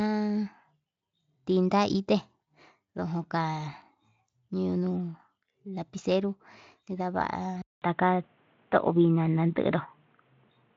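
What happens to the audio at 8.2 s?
From 7.62 s to the end at 10.77 s, after a 0.2 s silence, the speech loses everything above 3.8 kHz (it reached about 7.6 kHz before), its level shifts, and a faint new hiss appears. The gap and changed noise, not just lost treble, point to a likely input switched to a poorer device.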